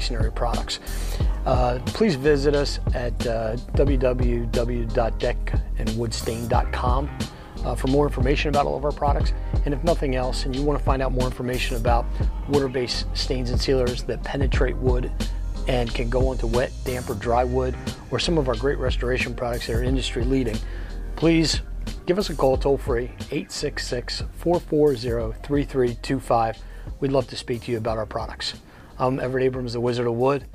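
No technical faults can be heard in the recording.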